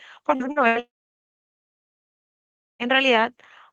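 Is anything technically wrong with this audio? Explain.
Yes. The speech is interrupted several times by network loss: two short concealed packet losses, then a burst of packet loss, then a long stretch where the audio drops out entirely.

Short concealed packet loss occurs at 0.35 to 0.43 s and again at 0.52 to 0.59 s. Each time about 40 ms of audio never arrived in time, and the receiver filled the hole by extending the preceding sound before blending back into the real signal. The sound is a quick smear or wobble. On a spectrogram, the spectrum runs unnaturally smooth and unchanged for a few hundredths of a second.

A burst of packet loss follows at 0.68 to 0.78 s. Roughly 80 ms went missing in a row, longer than the receiver can convincingly bridge. It repeated the last sound while turning it down, producing a held buzz or a fading hiss. The waveform shows a decaying, overly regular stretch. 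The spectrogram shows frozen bands dimming toward the end, followed by speech resuming with content skipped.

A long network dropout runs from 0.79 to 2.82 s, about 2 s in total. The sound is a very brief fading continuation, then about 1.9 s of silence before the speech returns abruptly, with the intervening audio gone. The likely cause is that no packets arrived at all for that period. The waveform goes flat, and the spectrogram is blank across all frequencies for that span.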